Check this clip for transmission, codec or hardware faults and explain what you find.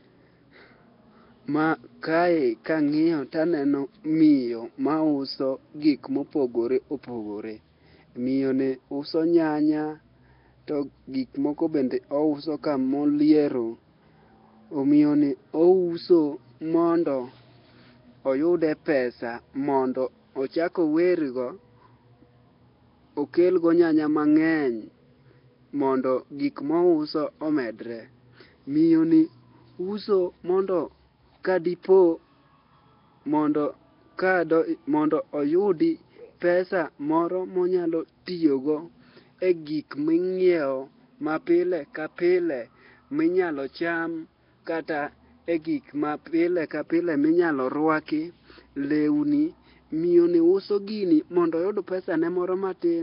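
One codec fault runs through the whole clip. Throughout: likely Nellymoser compression at a rate near 22 kbps gives weak bands no bits and fills them with noise. The speech sounds heavily rough, hissy and underwater, with nothing above 5.3 kHz.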